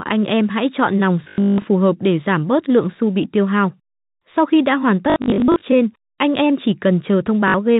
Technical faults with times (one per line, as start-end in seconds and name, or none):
1.24-1.64 packet loss with last packet repeated
5.10-5.62 packet loss with last packet repeated
7.48-7.54 packet loss with last packet repeated